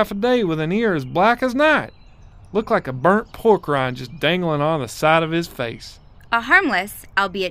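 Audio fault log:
Nothing stood out on listening to this speech recording.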